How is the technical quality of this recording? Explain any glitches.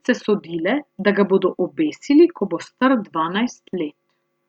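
No technical glitches can be heard in this recording.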